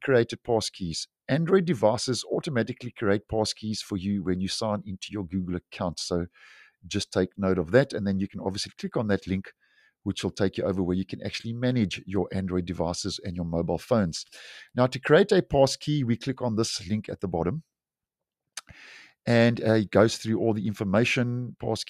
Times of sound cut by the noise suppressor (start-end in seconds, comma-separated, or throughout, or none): 9.71-9.89